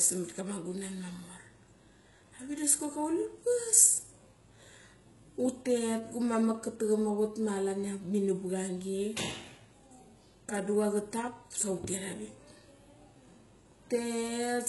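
HE-AAC compression runs through the whole speech clip, and the treble is likely rebuilt by spectral band replication rather than coded directly. Only the lower band carries real detail; the upper range is patched in from copies of lower bands under a coarse envelope, so its harmonics don't line up with those below. S sounds come out gritty, metallic and lispy, the damage is heavy, and nothing sounds above 11.5 kHz, which fits a bitrate near 12 kbps.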